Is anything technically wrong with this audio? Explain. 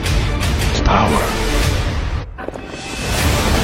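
Yes. Damaged data in a compressed stream breaks the audio twice, at 0.75 to 0.80 s and 2.19 to 2.25 s. Corrupted bytes make the decoder misread frames and resync, producing a brief chirp or squawk. A plain dropout would give silence instead.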